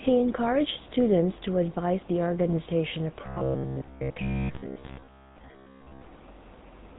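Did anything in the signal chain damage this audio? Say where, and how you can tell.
Yes. The damage happens at the codec stage and runs for the whole clip. The speech carries the buzzy, gravelly roughness of the GSM full-rate codec, and the band stops abruptly at about 3.8 kHz. The codec reduces the voice to a vocal-tract filter fed by a coarse, regularly pulsed excitation, so fine detail in the source is replaced with a rasping texture. The plainly audible degradation fits GSM full rate at around 13 kbps.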